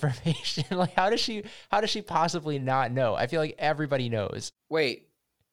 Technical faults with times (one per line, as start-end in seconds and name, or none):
none